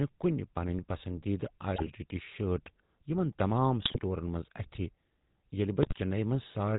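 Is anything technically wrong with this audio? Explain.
Yes. Throughout, the speech has a buzzy, gravelly roughness and sounds dull, with nothing above about 4 kHz. That is GSM full-rate codec damage, and it is plainly audible. The sound points to the original 13 kbps GSM codec, which rebuilds speech from a vocal-tract filter driven by regularly spaced pulses, keeping only every third excitation sample. The coarse excitation causes the buzz, and the band limit removes the airy top end.

Three brief bursts of squawking, popping and gargling break up the speech: 1.76 to 1.90 s, 3.82 to 4.01 s, and 5.83 to 5.99 s. These are GSM bit errors. Corrupted bits reached the decoder, so the filter, pitch and gain values for several consecutive frames came out wrong. Each burst lasts roughly 0.14 to 0.19 s and points to an error rate of around 3 percent during those moments, which is enough to distort the spectrum and make the level jump.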